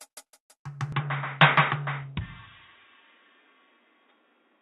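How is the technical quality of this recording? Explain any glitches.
The recording has one clear fault: its tone degrades partway through and never recovers. From 0.92 s to the end, the music goes dull and boxy, with nothing above 3.8 kHz. A faint new noise floor sits well below it, and the loudness holds steady. There is no gap at the change. The likely cause is an input switched to a poorer device, a narrower-band microphone or headset path that cuts the highs and brings its own noise.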